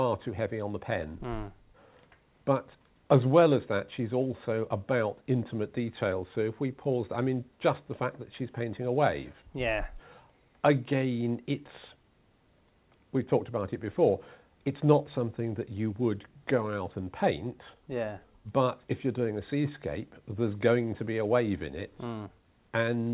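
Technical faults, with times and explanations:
No technical faults are present in this clip. The audio has passed through a call path with nothing above 4 kHz, a narrowband character that fits G.711 mu-law coding at 64 kbps.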